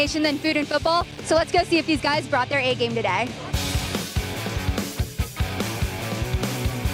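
Processor overload crackle runs from 1.01 to 1.17 s. The processor falls behind and misses a handful of buffer deadlines in quick succession, each leaving a hard-edged silent gap, which fits buffers of around 5 ms. The gaps merge into a brief gritty crackle over the sound.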